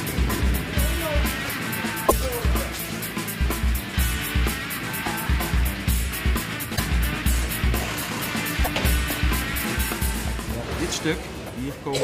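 Short garbled bursts at 2.08 s, 6.75 s and 8.64 s, each about 40 ms long, are likely a broken MP3 bit reservoir. They show as brief broadband smears or gaps where the waveform jumps ahead.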